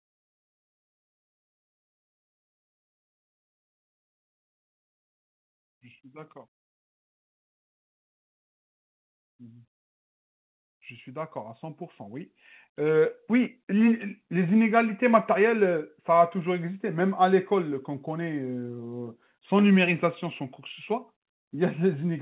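From 11.04 to 14.12 s the speech and the background noise swell together by about 9 dB. This is automatic gain rising: the gain control judged the input too quiet and raised its gain gradually. The audio is band-limited at 4 kHz, which fits a narrowband telephone codec such as G.711.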